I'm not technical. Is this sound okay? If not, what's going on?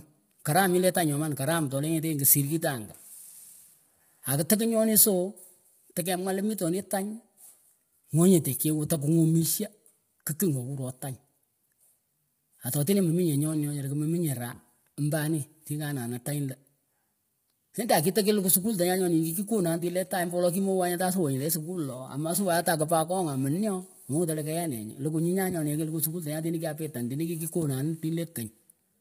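No. From start to finish the speech sounds rough and grainy, with a hiss filling the gaps between the tones of the voice and an artificial sheen on the brighter sounds. Nothing at all comes through above about 15.8 kHz. The likely cause is heavy low-delay AAC compression, the kind used in video calls: it chops sound into very short slices to keep delay down, so it captures the voice's pitch poorly.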